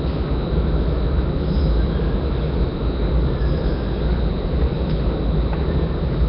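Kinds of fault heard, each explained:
Nellymoser compression: The audio carries a rough, hissy halo and a smeared, underwater blur throughout, with nothing above 5.3 kHz. This heavy damage likely comes from Nellymoser Asao, Flash's microphone codec, which codes short fixed-size blocks on a tight, constant bit budget, consistent with a rate around 22 kbps. Bands too weak to earn any bits are replaced with generated noise, which produces the grainy wash around the sound.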